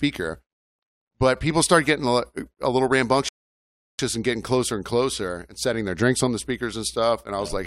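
At 3.29 s the speech drops into silence. This is a rebuffering stall: playback drained its downloaded audio and waited for more. Sound returns at 3.99 s on "and getting closer and", exactly where it stopped. Nothing is missing, but about 0.7 s is added.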